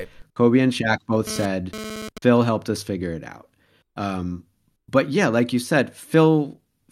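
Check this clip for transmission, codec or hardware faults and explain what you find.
GSM phone buzz appears from 1.27 to 2.18 s: a raspy 217 Hz buzz, about 12 dB below the speech. A nearby phone's burst transmissions are rectified by the audio circuitry. Unlike mains hum, it is rich in harmonics and starts and stops with data traffic.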